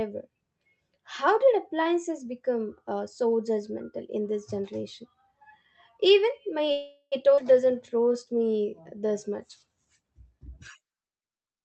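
A call audio freeze runs from 6.71 to 7.14 s. The speech stops and the last sound is stretched into a fading buzz for about 0.4 s, ending in a brief silence. Packets were likely held up in transit, draining the jitter buffer, so a pause was inserted while nothing was lost.

A skip ahead follows at 7.36 to 7.39 s. Roughly a fifth of a second of speech is simply gone, and the two sides are butted together with only a tiny join. That stretch was dropped while later audio was already waiting.

A jitter buffer slow-down spans 7.64 to 9.82 s. The receiver repeated single pitch periods and scraps of pauses to rebuild its reserve, adding 195 ms. Speech plays at about 91% speed at unchanged pitch, sounding drawn out, with the call codec's band limit near 8 kHz present throughout.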